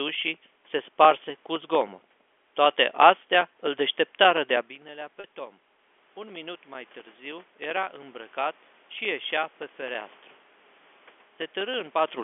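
From 0.09 s to 12.19 s the audio carries periodic USB or driver dropouts: every 64 ms, roughly 15 times a second, a brief slice of signal, about 2 ms, is lost and replaced by silence. Something is stalling the bus or driver on a fixed schedule, and each stall punches a small hole in the stream. The result is a steady, regular ticking that rides on the speech and the room noise throughout and is audible wherever there is signal, around 200 ticks in all.

At about 4.5 s the talker moves back from the microphone and the input falls by about 15 dB. From 4.84 s to 8.42 s the automatic gain rises to compensate, adding about 6 dB over those three and a half seconds. Because the gain acts on the whole input, the voice and the room background swell together, and the background lifts as the control works to restore the level.

Inside that stretch, at 5.20 s to 5.24 s, there is packet loss with pitch repetition. 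About 40 ms of audio goes missing, which fits two 20 ms telephone packets. The receiver fills the gap by looping the last pitch period. The loss is shorter than a full fade-out, so it comes across as a short, slightly held, buzzy note before normal speech resumes, all within the narrow 250 Hz to 3.4 kHz telephone band.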